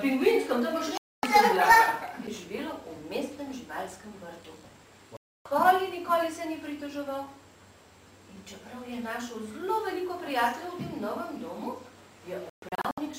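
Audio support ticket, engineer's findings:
Digital broadcast dropout, 0.98–1.24 s: sound mutes abruptly for about 256 ms, then resumes mid-programme. Receiver muting on lost signal or failed frame checksums; fits roughly eight 32 ms frames discarded. Content lost.

Same fault, 5.17–5.46 s: clean mute of about 288 ms, consistent with nine bad frames. Decoder holds silence until valid frames return.

Same fault, 12.50–12.98 s: several short holes over about 480 ms, longest 128 ms. Intermittent reception, with frames failing and recovering in bursts.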